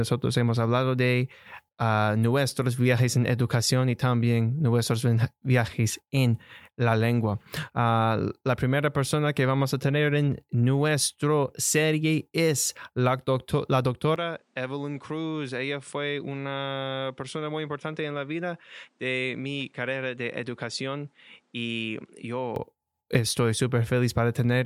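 Speech clip where, from 14.16 to 22.56 s, the sound drops about 10 dB, loses everything above 10.5 kHz and gains a new, low background noise, with no gap at the switch; the likely cause is an input switched to a poorer device, not a simple level change.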